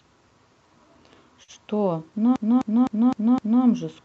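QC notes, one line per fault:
1.43 to 1.51 s, short stall from a late packet: a packet came in late, so the last sound got stretched about 49 ms, then carried on with nothing lost.
2.36 to 3.64 s, system hang loop: the system froze while playback cycled one 256 ms chunk, five repeats at about 3.9 per second, a skipping-record repeat fitting a 4096-sample buffer.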